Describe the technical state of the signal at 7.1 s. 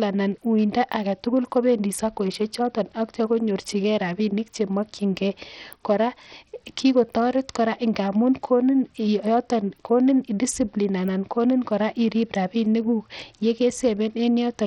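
At 7.1 s, as throughout the speech, a starved bit pool, likely from Bluetooth SBC compression near 64 kbps, leaves the treble flickering, adds gritty noise, and removes everything above 17.3 kHz.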